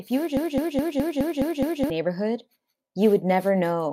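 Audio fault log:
0.37–1.9 s: broken-record loop. After "you were", a 209 ms fragment repeats exactly seven times back to back, likely from a stalled player resending its last buffer, losing the speech meant for that span.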